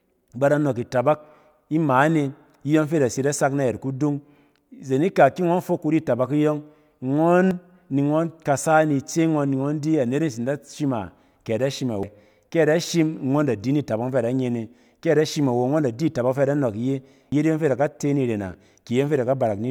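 Samples were likely overwritten before being read, a dropped buffer (overrun), at 7.51 s before "ni ngↄn kasa ni", at 12.03 s after "a kɛ ada shim", and at 17.32 s, losing about 100 to 150 ms each. Each sounds like an abrupt jump in the speech.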